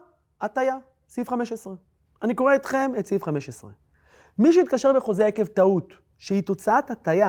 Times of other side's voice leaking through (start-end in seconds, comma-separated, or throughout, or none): none